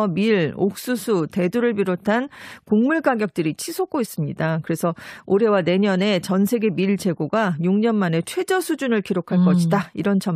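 Speech recording, no technical faults detected.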